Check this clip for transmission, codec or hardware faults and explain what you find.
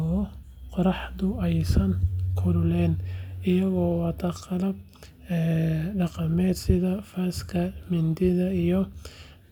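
One fault turns up in this speech clip. At 2.11 s there is a brief click, a tiny stutter where a sliver of sound plays twice with a hard join. This is a repeated buffer: fresh audio arrived late, so the device replayed its last chunk once. The length fits a 10 ms buffer, and essentially nothing seems lost.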